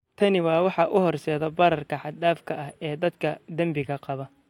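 No technical faults can be heard anywhere in the recording.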